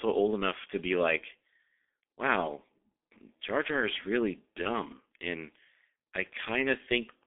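From start to finish the speech carries G.723.1 codec damage, and heavy. The band stops near 3.6 kHz, with the line limited to roughly 300 Hz to 3.5 kHz. Slow, coarse frame updates that fit about 6.3 kbit/s leave the voice muffled and hoarse, consonants smeared.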